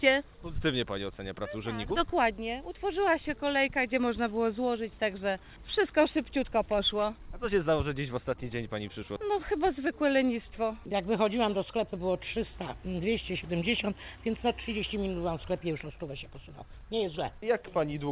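No technical faults can be heard anywhere in the clip. It has come over a call path whose narrow band, with nothing above 4 kHz, points to a G.711 mu-law link at 64 kbps.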